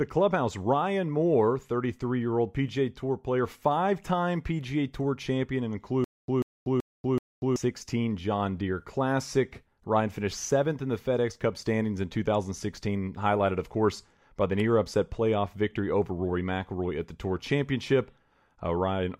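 The playback or stream most likely stalled just after "champion and", and each retry replayed the last fragment before running dry. From 6.04 to 7.56 s this produces a stutter with silent gaps: a 140 ms burst of the same speech repeats four times at an even pace of one every 380 ms, with about 240 ms of dead digital silence between repeats. The speech that should have filled that stretch is lost.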